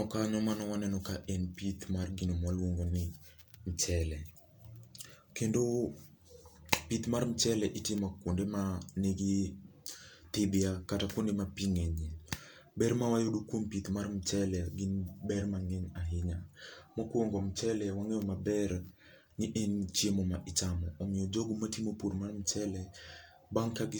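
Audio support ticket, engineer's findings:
No audible faults found.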